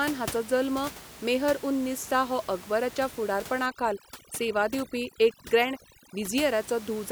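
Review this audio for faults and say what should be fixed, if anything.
From 3.66 to 6.39 s the background drops and breaks up into twinkling specks. This is overdone noise removal: the reducer, set too strong against room noise about 17 dB below the speech, mutes individual frequency bands and strips quieter speech detail with them. Lower the reduction strength so those bands are attenuated rather than switched off.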